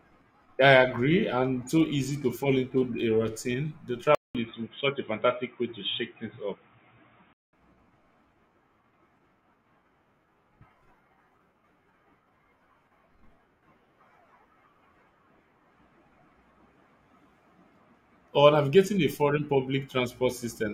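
From 4.15 to 7.53 s the input likely switched to a poorer device: after a 200 ms silence, the speech turns dull, with nothing above 3.8 kHz.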